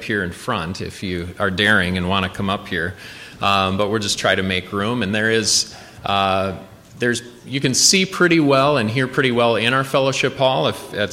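No technical faults can be heard anywhere in this audio.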